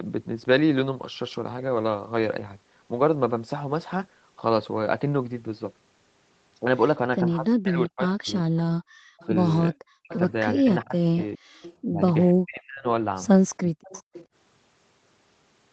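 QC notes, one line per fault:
7.23–8.56 s and 9.71–13.88 s, speech suppressed in double talk: the talker's level dips by up to about 40 dB, over roughly 0.7 s and then about 2 s in total. This is likely the echo canceller attenuating the near-end voice while the far end is also active.
8.57–11.75 s and 13.86–14.26 s, echo leak: a delayed copy of the speech trails it by 413 ms at about 20 dB below the direct voice. This is likely residual loudspeaker echo that the far-end canceller failed to remove and sent back.
8.84–9.19 s, background gated by the echo canceller: the room tone drops by about 36 dB for roughly 0.4 s and then recovers. The canceller clamped the microphone hard while the loudspeaker played and released it once playback eased.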